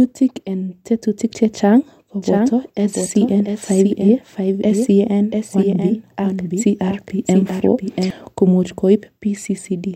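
A second copy of the speech was most likely captured through a slower path and mixed back in, producing a doubled audio track from 2.22 s to 8.10 s. The copy trails the original by roughly 0.7 s and sits around 5 dB quieter, full-band and dry, with no decay or room colour. Every phrase is echoed by a distinct repeat, and the copy cuts in and drops out abruptly at those two points.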